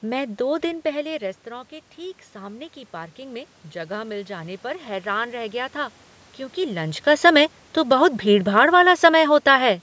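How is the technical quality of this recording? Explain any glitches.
The recording has two automatic gain control faults, the rising one set off by the talker changing distance from the microphone; the room noise and the call processing's cut above 8 kHz are part of the capture.

From 1.03 to 6.03 s comes automatic gain rising. Just after the talker moves away, around half a second in, the input drops by about 14 dB, and the automatic gain control slowly adds about 6 dB over five seconds. Voice and room noise swell together. On a waveform the envelope creeps upward across that span, and on a spectrogram the noise floor between phrases brightens along with the speech.

From 7.18 to 9.74 s comes automatic gain falling. The talker moves again at about six and a half seconds, and the control then pulls gain down by about 4 dB over roughly two and a half seconds, so speech starts loud and sinks with its background. 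The waveform shows a tall burst tapering off, and the spectrogram shows both speech and noise fading evenly.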